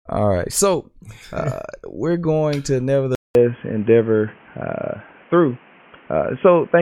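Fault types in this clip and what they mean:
Input switched to a poorer device: after "uh we're going to" at 3.15 s, the speech drops out for 200 ms and returns boxy, with nothing above 3.3 kHz, a level shift of some 5 dB and new background noise. That is likely a microphone change, since a plain filter adds no gap or noise.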